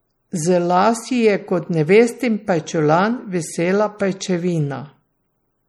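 Throughout the speech, the sound is watery and swirly, and plainly damaged. S sounds carry metallic chirps. Onsets of syllables blur. The likely cause is MP3 compression at a low bitrate, one that fits about 48 kbps. Short of bits, the encoder dropped weak frequency lines. Those lines flicker on and off between frames.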